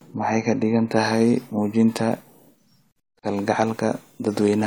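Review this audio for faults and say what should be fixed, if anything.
At 3.19 s the speech drops out abruptly for about 38 ms, to 3.23 s, with smeared edges, then resumes exactly where it left off. This is a gap at a join of encoded pieces. The audio was encoded in separate sections, about 6 s each, and joined untrimmed, so one encoder's padded final frame and the next encoder's start-up delay both remain as silence at the splice. To prevent it, encode the whole stream in one pass, or trim encoder delay and padding before joining pieces.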